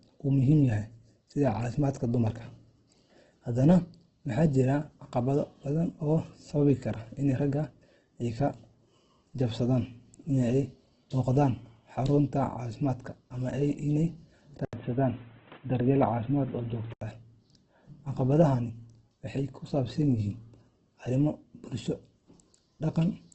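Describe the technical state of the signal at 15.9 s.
At 15.9 s the speech sits inside a stretch from 14.65 s to 17.01 s where the input was likely switched to a poorer device. Another microphone or a headset call path takes over. Nothing passes above 3.8 kHz, so the speech turns dull and boxy. A short silence of 80 ms marks the switch. A new background hiss arrives, well below the speech. Loudness stays about the same.

Opus compression also runs under this moment. It likely uses the CELT music mode at a rate that fits roughly 12 kbps. Starved of bits, the encoder fills bands with folded or noisy content. Tonal parts of the speech sound grainy and rough. The damage is heavy. Content stops at 8.2 kHz, but here the device limit at 3.8 kHz cuts lower.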